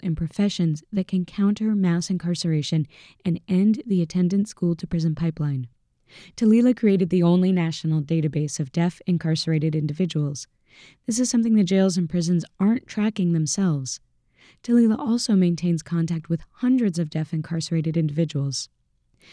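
Listening to this speech recording, nothing stood out as a technical problem at any point.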